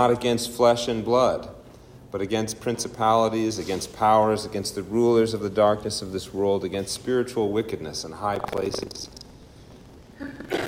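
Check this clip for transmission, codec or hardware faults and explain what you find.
One hardware fault, buffer tearing, runs from 8.32 s to the end. Writer and reader of the ring buffer have slipped, so about a fifth of each period replays audio from roughly 150 ms earlier. The result is a rattling buzz at 23.4 Hz, which fits a 2048-sample buffer. Unlike dropout clicks, it is a steady periodic rattle that stops whenever the signal stops.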